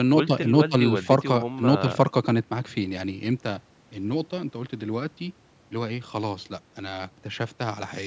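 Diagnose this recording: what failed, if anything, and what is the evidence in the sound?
Nothing stood out on listening; the speech carries the expected thin low end and top limit of call microphone processing and shows no failure at any stage.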